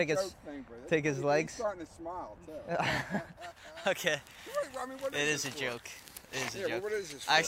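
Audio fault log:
3.37–7.48 s pre-emphasis left on. From 3.37 s to the end, the treble stands about 11 dB higher at 10 kHz than at 1 kHz. This fits a J.17 boost whose matching de-emphasis was never applied. The sound turns thin, bright and hissy.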